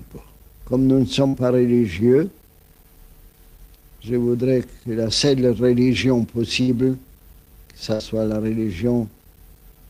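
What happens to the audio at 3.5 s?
Nothing goes wrong at 3.5 s; the audio runs through that moment intact, with no dropout, click or other disturbance.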